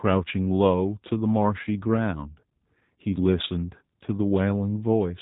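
From start to finish the speech carries G.729 codec damage. The band stops near 3.8 kHz, and the speech is rebuilt from a vocal tract model and sparse pulses, consistent with an 8 kbit/s coder. The result sounds plainly rough and slightly synthetic.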